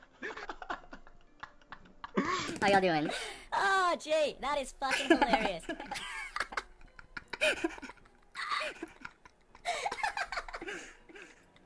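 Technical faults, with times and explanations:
2.48 to 11.66 s, wrong sample rate: the samples are clocked out faster than they were captured, with no conversion. Everything runs 1.38 times fast and about 5.5 semitones sharp, which fits 16 kHz material played back at 22 kHz.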